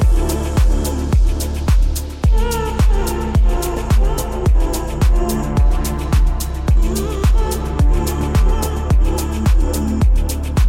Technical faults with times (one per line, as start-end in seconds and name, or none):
none